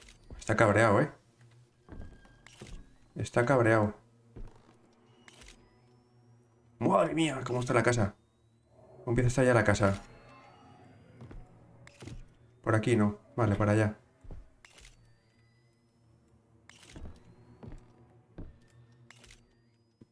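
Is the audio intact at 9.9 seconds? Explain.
Yes, the audio is intact at 9.9 seconds, with nothing at that moment that breaks or disturbs the sound.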